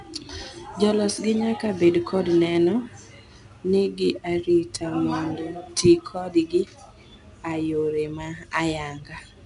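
Throughout the speech, each sample is coded as a coarse 4-bit step from a predicted value, which is 4-bit ADPCM compression and fits a rate near 88 kbps. The result is a plainly audible gritty hiss that tracks the level, roughened onsets, and nothing above 10.6 kHz.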